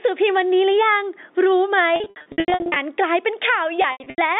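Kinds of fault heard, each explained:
Gain pumping: The level of the speech breathes throughout, a swing of roughly 15 dB. Loud and quiet passages sit unnaturally close together, giving a squashed, flattened sound. The likely cause is input gain set far too high for the microphone, with a fast limiter or compressor clamping down on every peak and releasing in the gaps.
Packet loss with pitch repetition: Lost packets are bridged by repeating the last pitch period and fading it out. From 1.96 to 2.76 s, about 500 ms of audio drops out in scattered runs across 800 ms, which fits 20 ms packets. The longest run is 80 ms. From 3.82 to 4.18 s, about 200 ms is lost across 380 ms in the same pattern. The telephone band carrying the speech is a normal G.711 line.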